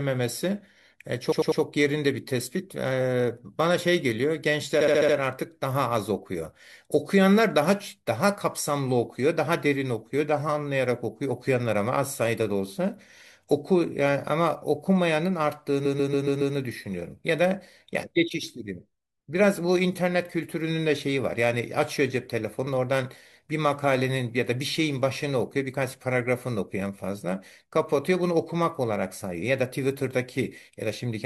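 A short run of compressed frames was sent more than once, so the decoder replays the same slice of speech: repeated frames. This causes a stuttering loop at 1.31–1.61 s (88.5 ms block, three extra plays), 4.80–5.15 s (59.5 ms, five) and 15.85–16.54 s (139.3 ms, five), stretching the audio.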